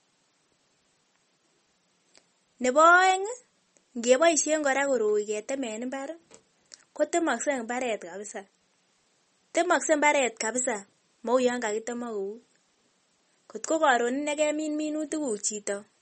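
From start to finish the speech carries a watery, swirly quality, and s sounds come out metallic and chirpy. Nothing gets through above 8.4 kHz, so the top end just stops. That's most likely MP3 compression pushed hard. The damage is plainly audible, which fits a bitrate around 32 kbps. Starved of bits, the encoder chops the treble and lets weak frequency components blink on and off between frames, and that flicker is what makes it swirl.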